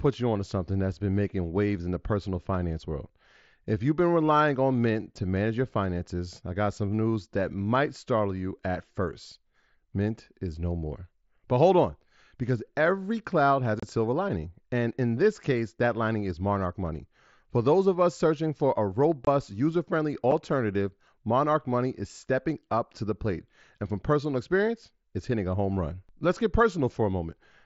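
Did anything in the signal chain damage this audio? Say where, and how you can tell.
Yes. Unconcealed Bluetooth headset packet loss on the wireless link left hard-edged silent gaps with nothing filled in: 30 ms at 13.80 s after "because every cloud has", 22 ms at 19.25 s before "user friendly", and 7.5 ms at 20.31 s.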